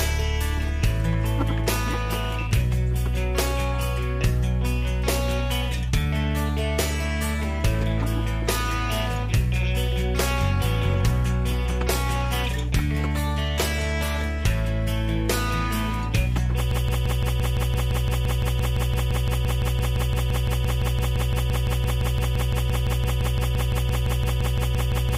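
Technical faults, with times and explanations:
16.71 s to end: broken-record loop. A 171 ms fragment repeats exactly, back to back, 50 times until the clip ends, and the audio due after 16.71 s is lost. The likely cause is a stalled player, encoder or stream resending its last held fragment.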